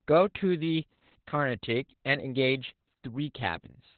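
From start to finish the speech carries heavy Opus voice compression. Nothing survives above about 4.5 kHz, so it has that narrowband, phone-line dullness, and the coarse coding of the excitation leaves it hoarse and a bit robotic. Everything's going through the SILK linear-prediction coder, and damage this heavy points to a very low bitrate, something like 8 kbps, which is why the voice sounds so muffled and grainy.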